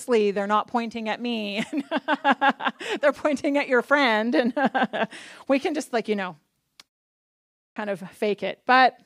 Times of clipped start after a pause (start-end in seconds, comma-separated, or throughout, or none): 7.72-7.76